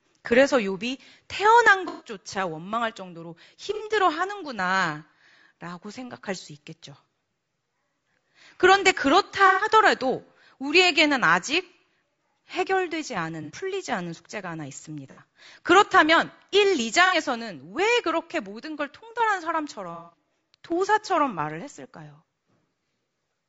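Throughout, the speech sounds rough and grainy. Noise fills the gaps between harmonics, and the top band sounds thin and synthetic. This points to low-delay AAC compression, likely AAC-ELD. Its short frames blur pitch detail. The damage fits a bitrate near 32 kbps.

AAC frame loss with concealment occurs seven times: 1.88–2.09, 3.74–3.82, 9.47–9.67, 13.43–13.51, 15.11–15.19, 17.06–17.14 and 19.94–20.17 s. Each time, frames went missing. The decoder patched the gap from the last good spectrum. The result is a brief smeared, noisy or phasey patch.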